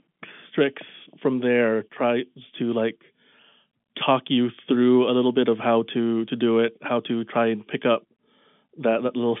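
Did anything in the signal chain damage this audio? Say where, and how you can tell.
No, nothing in the chain damaged this audio.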